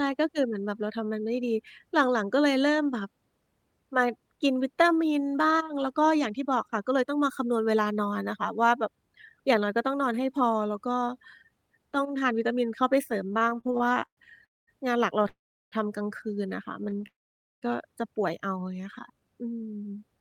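From 13.27 to 14.20 s the speech has repeated stalls, a stutter. It halts 15 times. Packets kept arriving late, so the jitter buffer kept running dry. Each time, the receiver stretched the last sound until it could resume. About 339 ms is filled in this way, 37% of the span. The longest hold lasts 118 ms. Nothing is lost. The speech drags and judders.

Three call audio freezes follow, at 14.45 to 14.70 s, 15.28 to 15.75 s and 17.07 to 17.65 s. Each inserts a gap of 221 ms, 435 ms and 553 ms. The last sound carries on briefly and then fades. Silence fills 210 ms, 360 ms and 500 ms of those gaps. The speech then resumes where it stopped, so nothing is missing. The likely cause is packets held up in transit, leaving the jitter buffer empty.

Between those freezes, from 16.84 to 17.06 s, a second stutter brings four short stalls. None is longer than 20 ms. Together they fill 69 ms, 32% of the span.

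From 18.80 to 19.26 s there is a jitter buffer slow-down. The receiver built up a reserve by repeating single pitch periods or pieces of pauses many times over. This adds 53 ms, and the speech plays at 91% speed. The pitch stays the same. Sounds are drawn out.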